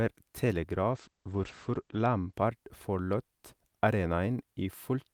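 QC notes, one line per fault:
0.93–2.39 s, call bitrate drop: the encoder was starved of bits, fitting a fall from 40 to 13 kbps, so speech turns coarse and watery, capped at 8 kHz.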